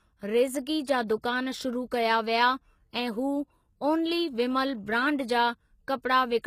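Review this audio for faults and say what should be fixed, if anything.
HE-AAC compression damage runs through the whole speech clip. Nothing is present above 14.9 kHz. The treble is likely rebuilt from copied lower bands, so s sounds turn gritty and lispy. This fits a very low bitrate near 20 kbps. Encode at a higher bitrate, or use plain AAC.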